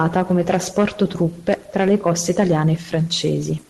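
No technical faults can be heard in this speech clip. It has passed through a call codec whose bandwidth stops at around 12 kHz, which fits Opus at a modest bitrate, and that limit sets the top of the sound.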